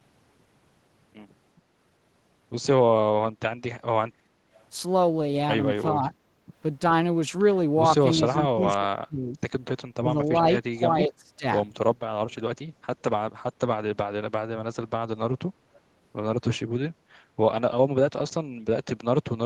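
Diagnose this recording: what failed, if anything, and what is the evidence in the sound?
The speech dips in level whenever the far side appears to be talking: a shallow dip of about 5 dB from 5.93 to 6.13 s, then much deeper cuts from 8.19 to 9.5 s (down by roughly 30 dB), 10.0 to 10.19 s (about 20 dB) and 10.92 to 11.46 s (about 25 dB). This is speech suppressed in double talk, at the call-processing stage. The echo canceller likely could not tell the local talker from loudspeaker echo and attenuated both.

From 6.34 to 6.47 s the room background drops by about 9 dB and then comes back. This is background gated by the echo canceller, also in call processing. While the loudspeaker was active, the canceller's suppressor clamped down on the microphone signal and took the ambient sound with it. The background returned once the suppressor released, so the gap is short.

Between 8.27 and 8.37 s a faint, delayed copy of the speech surfaces, about 25 dB below the main speech and trailing it by 396 ms. 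It is brief and scrappy. This is an echo leak in call processing. The delay and low level point to the far end's loudspeaker sound likely reaching its microphone and slipping past an echo canceller that did not fully remove it. The residue was then sent back down the call.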